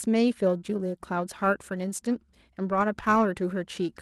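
From 0.45 s to the end, periodic clock jitter at around 1 kHz puts sidebands on every speech component, most strongly on high frequencies, giving a rough, metallic edge. Unlike steady hiss or hum, it disappears whenever the speech pauses.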